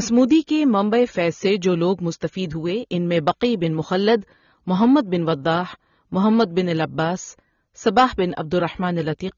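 Throughout, the speech has a plainly audible dull, smeared, warbling texture on sustained sounds and sibilants, likely from AAC compression at around 24 kbps, where coarse quantisation discards spectral detail. Crackle on peaks is heard at 0.18 to 0.33 s, 3.28 to 3.30 s, 4.82 to 4.85 s and 7.87 to 8.05 s. This is hard clipping: overload of about 1, 2, 2 and 5 dB flattens the peaks and adds high harmonics.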